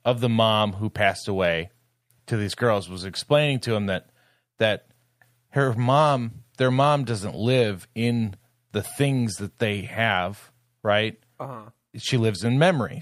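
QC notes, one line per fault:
Nothing to flag here, as the speech comes across without any faults worth noting.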